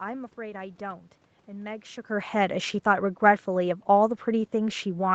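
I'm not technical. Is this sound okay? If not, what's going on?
Yes, the audio is technically fine: it has gone through an ordinary call connection, so it sounds like a normal phone or video call, and nothing in it points to a problem with the system.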